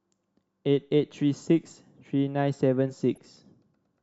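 Right near the end, from 3.15 to 3.18 s, there's a short burst of DAB burbling. The reception was weak enough that some bit errors slipped past the error correction and into the MP2 audio, at a rate well under a tenth of a percent. Corrupted samples put short blips of noise into single sub-bands across a couple of frames, so you get a quick burst of noise sitting on top of the speech.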